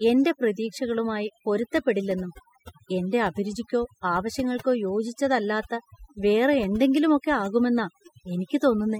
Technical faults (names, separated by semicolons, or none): overdone noise removal